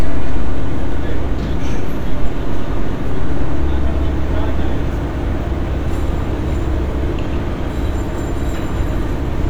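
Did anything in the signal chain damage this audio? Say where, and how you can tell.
No, nothing along the chain seems to have done any harm here, and the sound comes across just as it was recorded.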